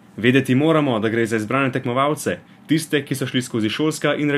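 Nothing in this speech recording points to a technical fault, and the signal sounds intact throughout.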